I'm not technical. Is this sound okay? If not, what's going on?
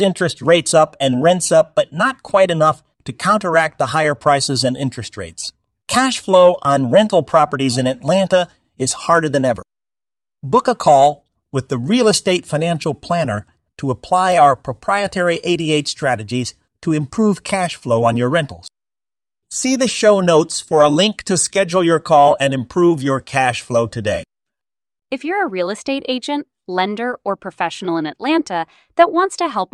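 No. There are three sharp clicks in this speech recording: at 14.32 s, just before "our proprietary"; at 21.47 s, between "for a link to" and "your call and improve"; and at 23.52 s, between "call and improve your" and "flow today". These are likely dropped samples. A tiny sliver of the recording, far less than a millisecond, goes missing. The sound then jumps abruptly, and that jump is the click. No words are lost.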